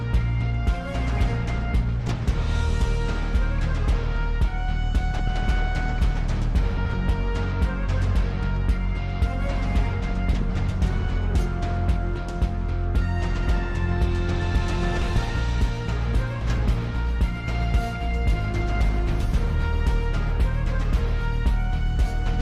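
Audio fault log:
2.00–2.18 s, 5.12–5.28 s, 6.78–6.94 s, 10.33–10.50 s, 15.01–15.18 s and 16.41–16.58 s: frames out of order. In each of these roughly 160 ms stretches, two adjacent 80 ms blocks play in swapped order, which fits runs of four 20 ms frames being decoded in the wrong sequence. The later sound arrives first, so each spot is heard as a brief garbled flutter. Nothing is missing, and the timing around each spot stays intact.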